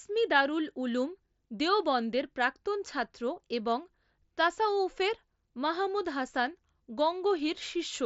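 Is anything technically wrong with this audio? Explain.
No, nothing stood out on listening to this speech, which comes through the Bluetooth mSBC headset codec with its usual wideband ceiling and nothing audible above about 7.7 kHz.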